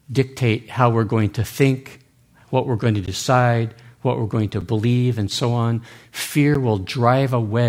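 Speech, in which the output stream was three times filled with zeros instead of audio, leaving blocks of digital silence with no fade: at 3.06 s for 15 ms after "what we're going to", at 4.61 s for 6 ms between "what we're going to" and "believe and so on" (which fits a 256-sample buffer), and at 6.54 s for 10 ms. Each one is heard as a tick or dip.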